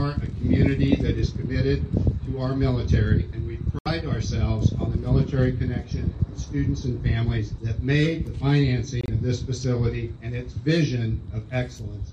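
Two short dropouts land in the sound, one at 3.79 s lasting about 82 ms and another at 9.01 s lasting about 88 ms, and both are a case of corrupt frame muted. Damaged compressed frames got rejected by the decoder, and the player filled the gap with silence, so each hole cuts in abruptly. The length points to roughly three frames lost each time. Timing stays intact, so nothing shifts afterward.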